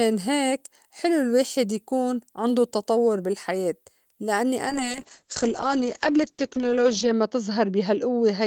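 From 4.71 s, just after "عندو تطوّر بالحياة لإنّي", the speech turns muffled and rough until the end. This is a call bitrate drop, pointing to an encoder fall from 32 to 8 kbps that narrows the bandwidth from 20 kHz to 8 kHz.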